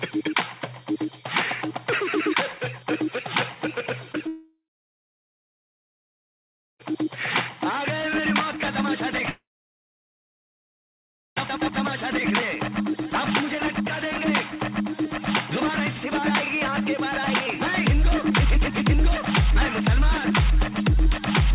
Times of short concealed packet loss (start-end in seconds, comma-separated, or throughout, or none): 4.12-4.16